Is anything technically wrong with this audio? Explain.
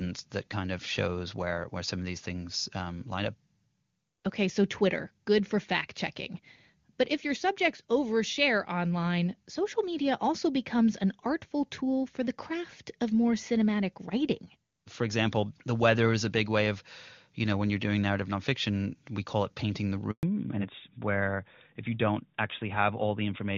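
Yes, two linked problems show up near the end, both from the call switching networks.

At 20.11 s there's a handover gap: the sound cuts out for about 120 ms, until 20.23 s. While the phone was handing the call from one network to the other, no speech frames got through, so the audio fades within a few tens of milliseconds and sits silent until the new link comes up. Whatever was said in that window is simply gone.

From 20.23 s to the end there's a fallback to narrowband. Before the switch, the HD Voice path sounds clean, consistent with AMR-WB running at a high rate like 23.85 kbit/s. After it, the call is on an older narrowband codec, most likely AMR-NB at 12.2 kbit/s, which can't carry anything above 4 kHz. You can hear the top end vanish, and the voice goes duller and a bit rougher for the last few seconds.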